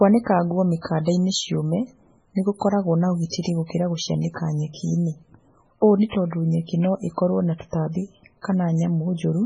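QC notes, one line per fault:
Throughout: MP3 compression, heavy. Nothing is heard above 10.4 kHz, so the treble stops at a hard ceiling. The speech sounds watery and swirly, with metallic chirps on s sounds and smeared consonant attacks. This is likely a starved MP3 encoder, and the damage fits a very low bitrate of about 16 kbps. Short of bits, it drops the top band and zeroes weak frequency lines that flicker on and off between frames.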